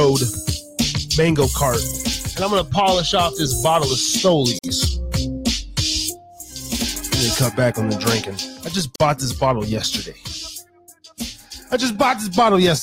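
Separately encoded pieces were joined without trimming encoder delay and end padding, leaving a gap at each join of encoded pieces: about 50 ms at 4.59 s and 44 ms at 8.96 s. Both have edges smeared by the codec, before the sound resumes where it stopped.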